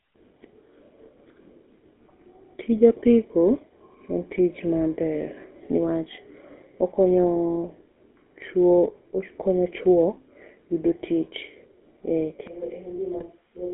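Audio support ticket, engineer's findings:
GSM full-rate codec, whole clip. Buzzy, gravelly voice. Band limited to roughly 250 Hz to 3.4 kHz. Sound fits 13 kbps GSM full rate. Pulse-driven vocal-tract model loses fine excitation detail. Damage plainly audible.

GSM bit errors, 2.08 to 2.13 s. Short squawk and gargle. Corrupted filter, pitch or gain values distort those frames. Points to a few damaged frames. Second burst, 13.18 to 13.23 s. Same pop and gargle, slightly shorter.

Switch to a distant microphone, 12.47 s to end. Sudden roomy, hollow tone with thinner bass. Level drops by about 10 dB. Faint room noise appears, well below the voice. Likely cause: close microphone dropped out, leaving a farther pickup.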